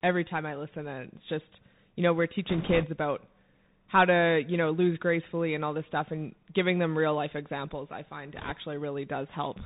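Throughout, the speech passes through a Bluetooth CVSD headset codec, a one-bit adaptive delta coder. That fits a 64 kbps link, which cuts everything above 4 kHz and leaves scratchy sibilants over granular hiss. From 2.49 to 2.86 s and again from 8.35 to 8.53 s, bit errors on the Bluetooth voice link flip a few percent of coded bits, adding a rushing crackle without loud clicks.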